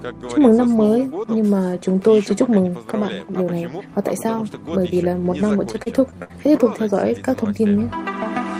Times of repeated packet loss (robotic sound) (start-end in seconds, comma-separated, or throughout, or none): 5.47-6.31